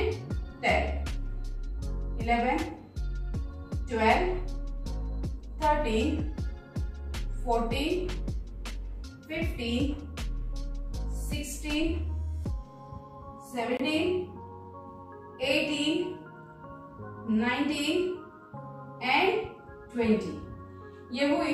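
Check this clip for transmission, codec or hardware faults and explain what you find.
One fault is audible. From 13.77 to 13.81 s the sound cuts to silence, then resumes as though it had kept playing. This is likely a Bluetooth dropout: late audio never reached the headphones, and about 23 ms of audio vanished, which fits one lost frame.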